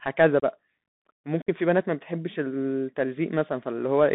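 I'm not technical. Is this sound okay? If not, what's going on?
No. The whole clip carries the sound of a Bluetooth CVSD headset codec, the basic phone-call link. It keeps only roughly 150 Hz to 3.7 kHz, so the speech sounds thin and boxy, with scratchy s sounds and a gritty hiss underneath.

There is also unconcealed Bluetooth headset packet loss, where bits of sound never arrived and nothing covered the gap. The speech drops out abruptly at 0.40 to 0.42 s, about 26 ms, and again at 1.42 to 1.49 s, about 49 ms, leaving short holes with sharp edges.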